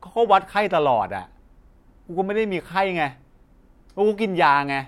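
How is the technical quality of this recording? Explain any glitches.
The speech recording has no technical faults to explain, and the signal stays intact throughout.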